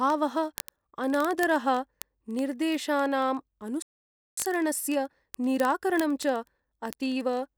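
A receiving device running on its own clock, unlocked to the sender's and off by roughly a tenth of a percent, drops or repeats one sample each time the two clocks slip. These are word clock ticks: sharp, uneven clicks roughly every 20 ms, running through the speech from 0.10 s to the end.

At 3.82 s the output goes silent for about 0.55 s, until 4.37 s. This is a playback stall, likely from the player's buffer running dry or its thread being blocked. The speech halts mid-flow and then resumes.

From 4.37 s to 7.37 s the player works through its accumulated backlog with time-compressed catch-up. It cuts out small pieces and cross-fades the joins, so the speech runs about 1.15 times faster at unchanged pitch.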